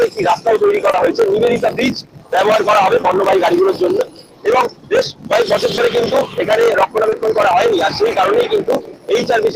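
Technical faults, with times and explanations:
Throughout: block size mismatch (truncated). One stage writes longer blocks than the next reads, which fits a 1024-sample read, so each block's tail is discarded. The result is a 46.9 Hz buzz and playback about 1.12 times fast with the timbre kept.
0.91, 3.01, 5.75 and 7.09 s: short concealed packet loss. About 20 ms of audio arrived too late each time, so the receiver extended the preceding sound and blended it back in, each event spanning about 0.04 s. Each gap is heard as a brief smear or wobble.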